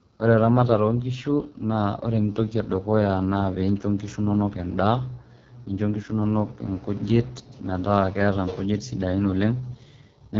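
Right from the start and all the way through, the speech has that AMR wideband (HD Voice) codec sound at its roughest: rough and raspy, with nothing above about 7.2 kHz. The heavy damage fits the lowest 6.6 kbit/s mode, where the pulse-driven model runs short of bits.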